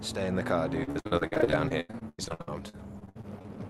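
From 0.83 s to 3.47 s, repeated packet loss chops the sound into a robotic stutter. Around 27 gaps, the longest about 91 ms, are patched by stretching the previous sound, covering roughly a third of the stretch. Unlike a single dropout, the holes recur rapidly rather than once.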